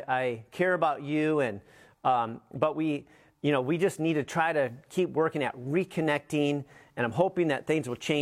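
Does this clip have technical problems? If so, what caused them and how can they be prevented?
No, this clip has no technical problems.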